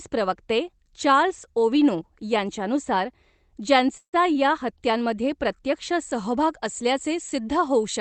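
From 3.97 to 4.15 s, a call audio freeze, likely from packets held up in transit until the jitter buffer ran empty. The receiver stretched the last sound into a fading buzz or hiss that drops to silence for about 90 ms, then resumes where it stopped, nothing lost.

From 6.11 s, right after "हत्यांमध्ये प्रत्यक्ष", to the end, pre-emphasis left on: the treble boost from a 50 µs curve was never undone, leaving 10 kHz about 10 dB above 1 kHz. The sound turns thin, bright and sharply sibilant.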